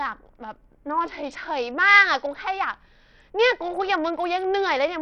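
From start to finish the speech carries a thin, gritty coarseness, with the treble dropping out and flickering rather than holding steady. The sound is most likely Bluetooth SBC compression at a starved bit pool, which fits a rate near 64 kbps. The upper sub-bands receive few or no bits, and the rest are quantised roughly. On a spectrogram the top end appears as broken, blinking blocks above a ragged cutoff, with a grainy noise floor and aliased images smeared through the sound.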